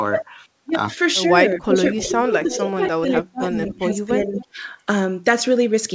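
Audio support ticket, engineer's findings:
Speech suppressed in double talk, 1.58–4.6 s: near-end speech ducks by up to about 20 dB, around 2 s affected in total. Likely the echo canceller, unable to separate local talker from loudspeaker echo during overlap, attenuated both.

Echo leak at 1.97–2.19, 2.51–2.62, 3.66–3.72 and 4.34–4.44 s: delayed copy of speech, 266 ms late, at about 10 dB below speech in the first two and about 20 dB in the last two. Likely a far-end loudspeaker echo canceller passing residual mic pickup. Band limit at 8 kHz consistent with G.722 at 64 kbps.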